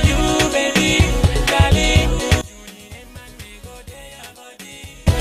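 From 2.41 s to 5.07 s the fault is likely one channel inverted, so content shared by left and right cancels when summed to mono. The level drops by about 22 dB, leaving only a faint residue of the channel difference.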